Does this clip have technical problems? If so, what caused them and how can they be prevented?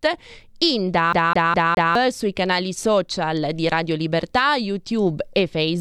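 Yes. From 1.13 to 1.95 s, just before "sui canali social di", a CD stuck on one turn replays a 0.21 s fragment four times, because a scratch throws the laser back one track. Waveform and spectrogram show identical blocks split by thin silent gaps. Cleaning discs and ripping them with error-correcting software prevents it.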